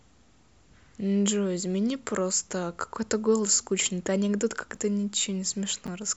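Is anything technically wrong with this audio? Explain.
Yes. Chunks out of order: at 4.75–4.77 s and again at 5.86–5.88 s, a 10.67 ms chunk arrived one chunk late and played after the chunk meant to follow it. Nothing is lost, but the swap creates three hard joins, heard as a brief jumbled moment.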